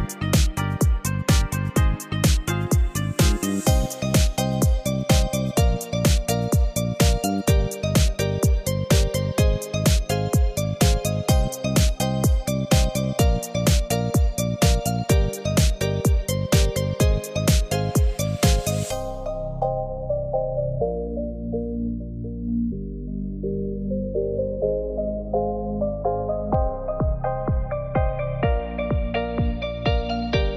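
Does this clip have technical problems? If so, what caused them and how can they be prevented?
No, there are no technical problems in this audio.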